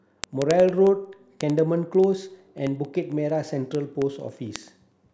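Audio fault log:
0.15–5.10 s, word clock ticks: the receiving device runs on its own clock, unlocked from the sender's and drifting by roughly 700 ppm. Each slip drops or repeats one sample, so ticks land about every tenth of a second through the speech, around fifty.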